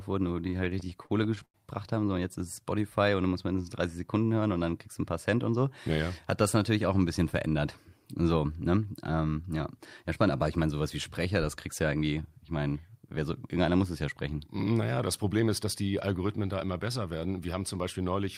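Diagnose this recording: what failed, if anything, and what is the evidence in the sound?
Repeated stalls (stutter), 0.57 to 1.56 s, just after "wurden die": the network jitter buffer ran dry 14 times, and the receiver stretched the last sound to bridge each gap (longest 87 ms). About a quarter of that stretch is filler, so the speech drags and stutters.

Jitter buffer speed-up, 15.23 to 15.65 s before "dass die", and 17.83 to 18.28 s after "da immer besser werden": with excess audio queued, the receiver trimmed short pitch-period chunks, around 50 ms each time. The speech runs about 9 to 10% faster at unchanged pitch and sounds hurried.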